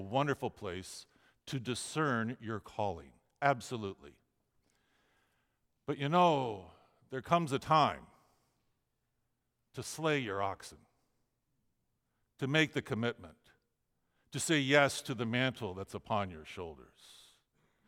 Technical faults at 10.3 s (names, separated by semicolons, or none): none